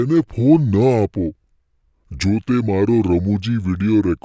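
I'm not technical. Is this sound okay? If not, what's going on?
No. There's a wrong sample rate fault that runs the whole way through. The audio was played back more slowly than it was recorded, with nothing adjusting for the difference, which fits a recording made at 22 kHz being played at 16 kHz. Because of that, the speech runs at about 73 percent of its proper speed, and the pitch drops by about five and a half semitones, so the voice sounds deep, slow and dragging from start to finish.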